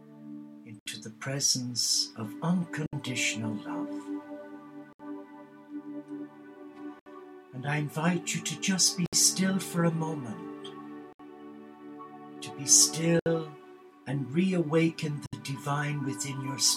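Short dropouts of about 67 ms cut the sound at 0.79, 2.86, 4.93, 6.99, 9.06, 11.13, 13.19 and 15.26 s, roughly every 2 s, each with softened edges before the sound resumes. These are gaps at joins of encoded pieces, where separately encoded segments were joined with each encoder's start delay and padding left in.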